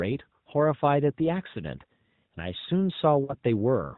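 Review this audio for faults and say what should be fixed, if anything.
Lost AMR speech frames occur at 1.52 to 1.55 s and at 3.24 to 3.35 s. The first is a short dip, about one 20 ms frame. The second is drawn out and fading, about two frames or 40 ms. Each time, frames failed their checksum after radio errors, and the decoder extrapolated from the last good pitch and spectral envelope at falling gain until valid frames resumed. The narrowband AMR path, band-limited at 4 kHz with only light coding damage that points to the 12.2 kbps mode, carries the concealment. Preventing this requires a stronger radio link or more channel protection, such as better coverage, more robust coding, or a lower AMR mode, so fewer frames arrive corrupted.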